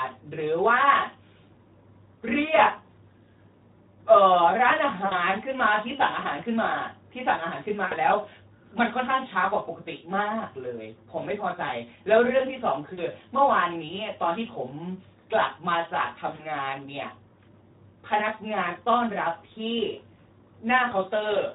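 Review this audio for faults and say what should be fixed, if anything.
Throughout, the speech sounds hoarse and grainy, with a noisy, smeared top end. This is Speex codec damage: the CELP coder has too few bits to describe the excitation, and the plainly audible damage fits a low setting of around 11 kbps. Encoding at a higher Speex quality setting, or with a more modern codec, would prevent it.

At 5.05–5.16, 7.85–7.94, 12.93–13.01, 16.35–16.45 and 20.89–20.94 s, the sound briefly turns into a buzzy tone or coloured noise that fades, and stays weak for a moment afterwards. This is VoIP packet loss concealed by the speech codec. About 60, 60, 40, 40 and 20 ms of audio were lost, and the decoder extrapolated the last pitch and filter while lowering the gain. Adding a jitter buffer, forward error correction or a more reliable network path would prevent the losses.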